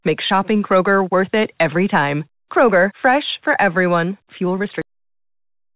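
At 4.82 s the speech stops dead, partway through a sound, and the remaining stretch to the end is flat digital silence with no tail or decay at all. This is a cut-off end: the final buffers of audio were never written out or played, so the recording ends abruptly instead of trailing off naturally. Before the cut, the narrowband call sound, with nothing above 4 kHz, fits a G.711 A-law connection.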